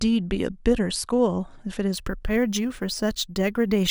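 From 1.94 s to the end, the speech takes on a gritty, inharmonic fizz that rides on the louder and brighter sounds, with a buzz sitting only about 20 dB below the speech itself. This is crude rate conversion. The audio appears to have been stretched from a lower rate to a higher one, which fits 32 kHz to 48 kHz, by simply repeating the nearest sample with no filtering. That stepped pattern repeats regularly and throws off tones unrelated to the voice.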